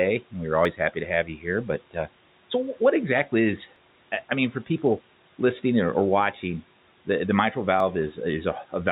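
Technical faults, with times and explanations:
0.65 s, 3.76 s and 7.80 s: dropped buffer (overrun). Each is a jump where the speech skips forward with no gap of silence, at 0.65 s just after "and we were", at 3.76 s between "so what exactly is" and "I mean for people", and at 7.80 s after "watching the the mitral". Roughly 20 ms of sound is missing each time. The likely cause is the capture program falling behind so that the hardware overwrote a block before it was read. A concealed network loss would instead leave a smeared or muted patch rather than a hard splice.
1.25–1.46 s: speech cut by the noise suppressor. Over roughly 150 ms the speech dips by up to about 10 dB, and softer sounds and endings turn faint and swallowed. The suppressor treated that low-level speech as noise and pulled it down along with the room noise, which sits about 24 dB under the speech. A plain level drop would behave differently, because it dips everything evenly. 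Here only the quiet parts fade, while the G.711 band limit at 4 kHz stays steady throughout.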